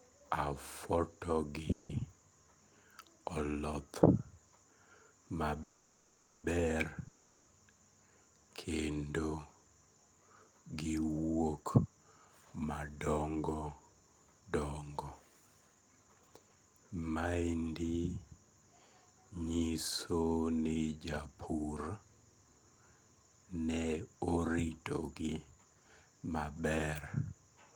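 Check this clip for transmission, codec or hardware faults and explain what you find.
Three kinds of fault can be heard in this speech: two call audio freezes, one long network dropout and two stretches of jitter buffer speed-up.

Call audio freeze, at 1.71 to 1.92 s and 5.63 to 6.47 s. The speech stops and the last sound carries on as a fading buzz for about 180 ms and then about 810 ms. The likely cause is delayed packets draining the jitter buffer, so the receiver stretched what it had. When the speech returns it picks up exactly where it halted, with nothing skipped. Each pause simply adds delay.

Long network dropout, at 7.08 to 7.51 s. This one also begins as a fading buzz lasting about 400 ms, with no drop to true silence. Unlike the freezes, the speech then resumes further on, with roughly 400 ms of it gone. That points to a likely loss of audio in transit that was never recovered, so the join sounds like a jump rather than a pause.

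Jitter buffer speed-up, at 11.64 to 17.62 s and 23.69 to 25.66 s. The speech runs about 13% fast in the first stretch and 10% fast in the second, which removes somewhat under a second in total. The receiver cut many tiny pitch-period slices to shrink an overfull buffer. The result sounds hurried, but the pitch stays where it was. That distinguishes it from a sample-rate or playback-speed error, which would raise the pitch as well.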